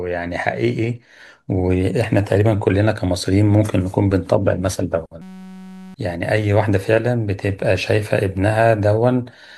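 From 5.22 to 5.94 s a system hang loop replaces the speech: the computer or driver froze while the hardware replayed one 5.33 ms slice, fitting a 256-sample buffer. So short a loop fuses into a steady 188 Hz buzz, not a stutter; roughly 0.7 s is lost.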